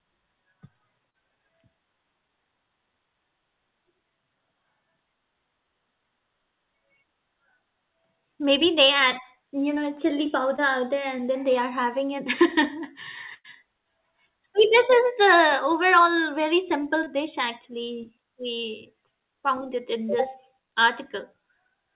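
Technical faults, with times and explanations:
1.10 s, 10.56 s and 17.04 s: short concealed packet loss. At each of these, roughly 30 ms of the call didn't arrive in time, and the receiver papered over it by carrying the last bit of sound forward for about 23 to 37 ms before easing back into the real signal. You hear it as a quick smear or wobble rather than a gap, and a short consonant sitting right there can just disappear.
13.34 to 13.47 s: burst of packet loss. This one's bigger, with about 90 ms of audio lost in a row. The receiver stretched the last sound out for about 100 ms and let it fade as the hole went on, so you get a held buzz or dying hiss instead of what was actually said, then the speech picks up again a little further along with that chunk simply gone. It all runs over a G.711-style call path that stops at 4 kHz, hence the narrow phone-line sound.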